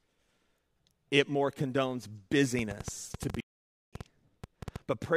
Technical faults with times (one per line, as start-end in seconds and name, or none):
2.59-4.77 train of clicks
3.40-3.93 playback stall